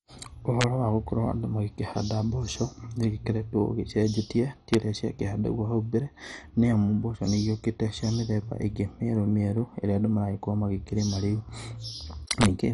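Throughout, the speech sounds dull and gurgling, with nothing above 11.3 kHz, likely MP2 compression starving upper sub-bands of bits, which fits a rate near 48 kbps. Violent, sharp cracks at 0.61–0.64 s, 4.74 s and 12.31–12.46 s are integer overflow. Peaks running from right at the limit to about 3 dB past it wrapped to the opposite sign instead of being held.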